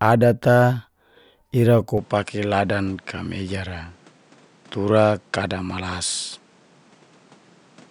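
From 1.98 s to the end the speech loses everything above 10.2 kHz and picks up faint new background noise, likely an input switched to a poorer device.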